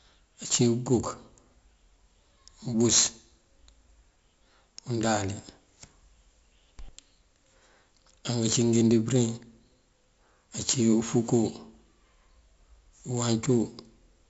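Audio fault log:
Throughout: 4-bit ADPCM compression. Coarse predicted steps leave gritty hiss riding every loud syllable, attacks distort, and nothing above 7.7 kHz, which fits a 16 kHz sample rate.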